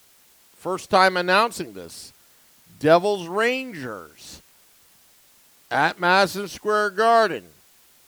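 From start to finish the speech carries low bit depth with dither. The steady, even hiss, roughly 35 dB below the signal, without distortion, fits 9-bit resolution.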